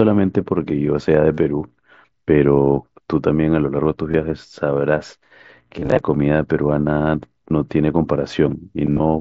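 Bluetooth headset packet loss, concealed by the phone, occurs four times. Voice packets from headset to phone went missing, and the receiver bridged each gap by repeating the best-matching recent stretch of waveform. Short patches of 37.5 ms at 1.34 s and 22.5 ms at 4.11 s are bridged this way. From 5.79 to 5.99 s brief losses scatter over 195 ms. From 8.87 to 9.00 s a 52.5 ms run holds a buzzy tone at full level, warbling as real audio returns.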